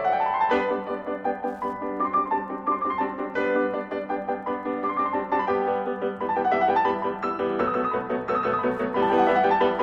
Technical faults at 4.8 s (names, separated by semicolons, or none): Wi-Fi interference